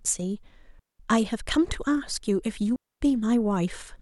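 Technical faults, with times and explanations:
0.79 to 1.00 s and 2.76 to 3.01 s: digital wireless dropout, twice. The speech drops into near silence for about 0.20 s, then for about 0.25 s. Each gap is a clean hole. No hiss, crackle or burst of noise comes before or after it. The digital receiver lost too much of the incoming data to rebuild the signal. It muted the output with a very short fade instead of passing on garbage. Sound returns once the link recovers.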